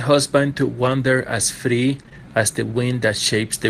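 Lost packets rebuilt from error correction affect this speech recording at 0.83–0.85 s, 1.99–2.01 s and 2.13–2.16 s. In each case audio went missing, one packet at the first two points and two at the third. The following packet carried a low-bitrate duplicate, so the decoder played that instead of a gap. Those 20 ms stretches sound coarser and noisier than their surroundings, a brief roughening rather than a dropout.

Short concealed packet loss hits three times in a row at 2.03–2.06 s, 2.06–2.09 s and 2.09–2.13 s. Each time about 20 ms never arrived in time. The receiver extended the preceding sound for roughly 10 to 12 ms, carrying on its pitch or shaped noise before blending back. This back-to-back run is heard as a smeared, wobbling patch from 2.03 to 2.13 s, where a short consonant-like detail can be lost.

Jitter buffer slow-down follows at 2.13–2.33 s, when the buffer was running low or had just raised its target delay. 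To rebuild its reserve, the receiver repeated individual pitch cycles and slivers of quiet, adding about 39 ms. Playback runs at roughly 84% speed while the pitch stays unchanged, so the sound is audibly drawn out.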